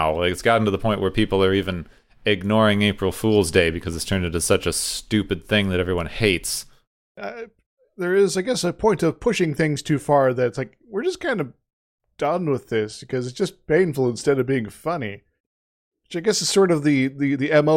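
Nothing stood out on listening to the speech here.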